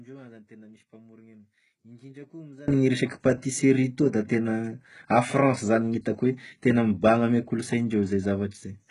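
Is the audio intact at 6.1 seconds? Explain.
No. At 6.1 seconds, as across the whole clip, the speech carries heavy codec damage, likely from HE-AAC compression at a very low bitrate, around 12 kbps. Nothing sounds above 11.1 kHz. The treble is rebuilt from copied lower bands, so s sounds turn gritty, metallic or lispy.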